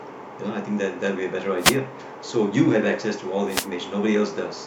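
A radio fade on an analogue FM wireless microphone link causes two wireless microphone noise hits in this speech. From 1.58 to 1.78 s, and again from 3.48 to 3.69 s, reflected paths cancel the direct signal at the receiver, so its own noise rises above the weakened carrier. Each drop lasts about a fifth of a second and is heard as a brief swish of static washing over the speech before the signal recovers.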